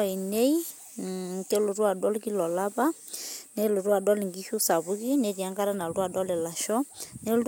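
No technical faults can be heard in this speech recording.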